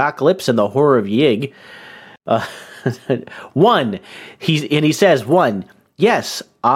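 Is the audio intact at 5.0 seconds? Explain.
Yes, the speech at 5.0 seconds is intact, with no dropout, click, distortion or other fault heard at that moment.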